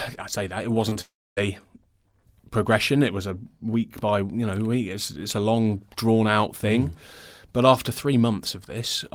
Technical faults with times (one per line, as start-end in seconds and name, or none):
0.89-0.97 short concealed packet loss
1.01-1.39 long network dropout